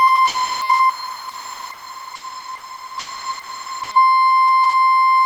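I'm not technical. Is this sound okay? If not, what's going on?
No. The music cuts out twice, from 0.27 to 0.61 s and from 0.89 to 3.91 s, and filler sound plays instead. This is likely sound dropped by the voice detector. The sending system mistook the music for background and stopped sending it.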